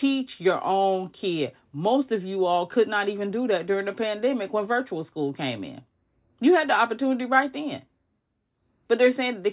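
No technical faults can be heard anywhere in the speech recording. Nothing breaks into or disturbs the audio at any point.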